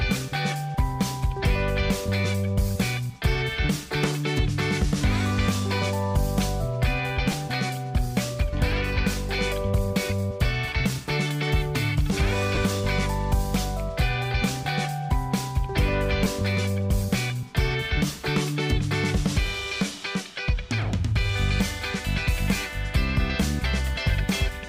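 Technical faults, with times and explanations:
7.32, 12.55 to 12.57 and 16.25, lost LE Audio frames: brief noisy smears replace tonal detail for about 10 ms, 20 ms and 10 ms. The LC3 decoder filled each gap by repeating the previous spectrum with randomised signs, which fits one or two missing 10 ms frames each time.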